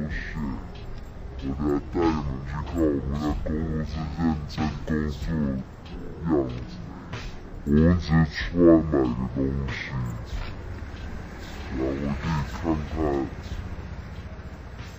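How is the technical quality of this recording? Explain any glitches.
The recording has one fault from start to finish: stereo read as mono. The player has taken the interleaved left and right samples as consecutive samples of a single channel, doubling the sample count. Playback therefore runs at 0.5× speed, 12 semitones (an octave) low, sounding slowed and deepened throughout, with a fainter mirrored copy of the sound in the upper half of the spectrum.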